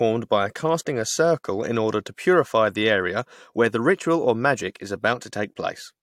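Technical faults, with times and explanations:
Nothing stood out on listening to the speech in this recording.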